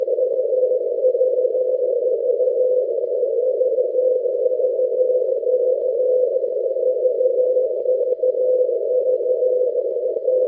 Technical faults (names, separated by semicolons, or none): none